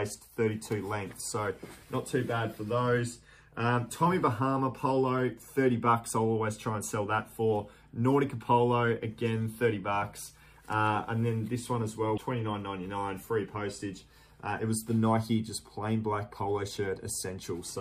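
At 12.14 to 12.18 s, a brief blip of about 44 ms marks damaged data in a compressed stream. Corrupted bytes left the decoder unable to parse those frames; it lost sync and recovered at the next valid frame header, briefly interrupting the sound.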